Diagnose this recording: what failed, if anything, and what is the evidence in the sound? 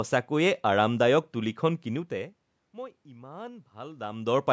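Nothing in the signal chain has failed: the speech shows the ordinary high-pass shaping of call microphone processing with no content above 8 kHz, a bed of room noise from the recording space, and level changes around 2 s and again near 3.5 s that come from the talker moving relative to the microphone rather than from any stage of the system.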